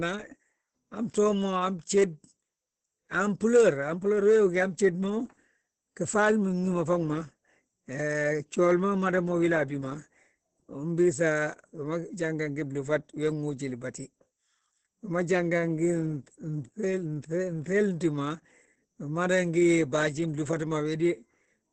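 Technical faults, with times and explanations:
throughout, Opus voice compression: the speech sounds muffled, hoarse and faintly robotic, with nothing above 8.4 kHz. Opus in its SILK linear-prediction mode has limited the band to wideband and coded the excitation coarsely, which fits a low bitrate around 10 kbps.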